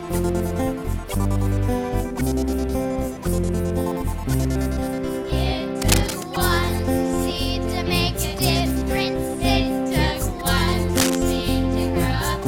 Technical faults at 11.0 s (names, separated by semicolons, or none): cable scratch noise